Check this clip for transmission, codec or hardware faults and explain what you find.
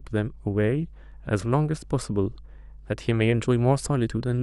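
There's one fault here: mains hum running under the speech from start to finish. It's a steady 50 Hz drone, sitting roughly 20 dB below the speech. A ground loop or a nearby transformer is bleeding the power line into the signal chain.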